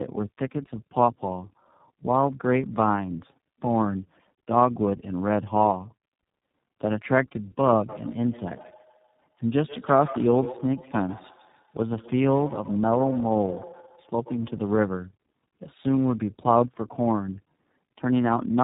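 Right from the start and all the way through, the speech has tandem speech coding damage: two low-rate speech coders in a row, the second recoding what the first already smeared. It's rough, muffled and warbly, with nothing above about 3.8 kHz, which fits a G.729-style stage feeding iLBC.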